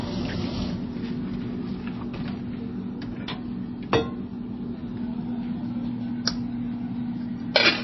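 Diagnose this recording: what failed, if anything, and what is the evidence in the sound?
Throughout the clip the sound is dull and plainly damaged: nothing reaches above 5.8 kHz, so the top octaves are simply gone, and the remaining detail has the watery, unstable texture of heavy lossy coding. The likely cause is MP3 compression at the codec stage. Starved of bits, the encoder cut the treble at a fixed 5.8 kHz and dropped weaker frequency lines frame by frame. The damage fits a very low bitrate, around 24 kbps.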